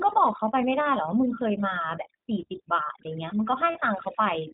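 From the start, the speech runs through overdone noise removal. The denoiser was pushed too hard, so any frequency band sitting near its noise estimate gets pulled way down. The background goes almost dead apart from little twinkling specks, and the quieter parts of the voice get eaten.

The whole clip also carries plainly audible iLBC codec damage. Nothing above 4 kHz survives, and the speech has that slightly rough, synthetic edge. The frame-by-frame character fits the 30 ms, 13.33 kbps mode.

At 3.72 to 3.75 s there's a burst of lost iLBC frames, about 30 ms, which points to a single dropped frame. The decoder covers the hole by repeating the last pitch cycle with some noise mixed in, so you hear a brief held, slightly buzzy vowel. Because each iLBC frame decodes on its own, the voice snaps straight back afterwards.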